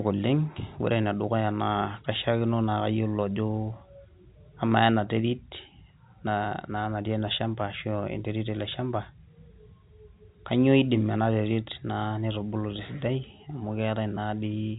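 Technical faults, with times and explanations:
No technical faults are audible.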